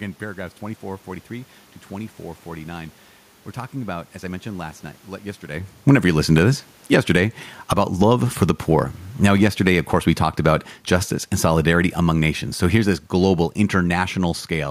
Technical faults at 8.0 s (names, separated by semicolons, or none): automatic gain falling